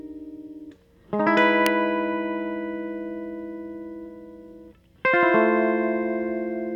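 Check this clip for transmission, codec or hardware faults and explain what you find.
One hardware fault stands out in the music. At 1.66 s there is an electrical switching spike: a sharp snap, peaking around -5 dBFS, sitting on top of the music rather than interrupting it. A nearby switch, motor or static discharge likely arced briefly and the audio line picked it up. On the waveform it shows as a needle-thin spike; on a spectrogram, a narrow vertical line spanning the full frequency range.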